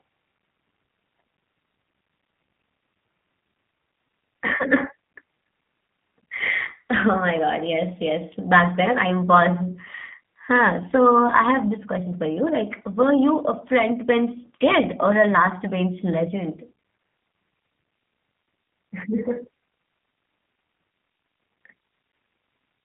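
Throughout the speech, the sound carries the marks of the G.729 codec. Nothing reaches above 3.5 kHz, and the line band runs from 150 Hz to 3.4 kHz. Each frame is rebuilt from a filter model and a few pulses, which fits an 8 kbit/s codec. The result is plainly rough and synthetic.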